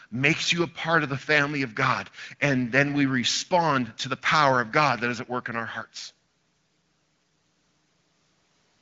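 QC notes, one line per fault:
No faults found in this speech clip. The AMR wideband (HD Voice) codec path at 12.65 kbit/s is audible as a top end that stops near 7 kHz, with the band above 6.4 kHz filled in by shaped noise and only light coding damage.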